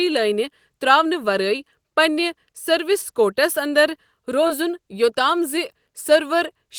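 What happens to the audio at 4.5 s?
At 4.47 to 4.51 s the speech has a short concealed packet loss: about 20 ms of audio never arrived in time, and the receiver improvised roughly 21 ms to cover it by extending the preceding sound, then crossfaded back into the real signal. It comes across as a quick smear or wobble.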